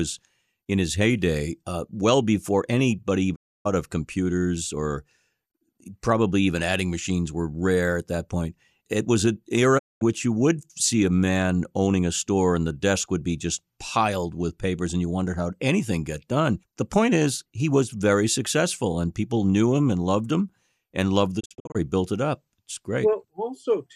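Speech with three digital broadcast dropouts, where the receiver loses good frames and mutes with a quick 20 ms fade. At 3.34 s, after "uh well before anybody", about 290 ms vanishes until "of computers or". At 9.77 s, after "point it was an", 220 ms is gone before "which you would see". At 21.39 s, after "loved him and loved", it stutters instead: short holes, none over 48 ms, scattered across 340 ms before "built it up".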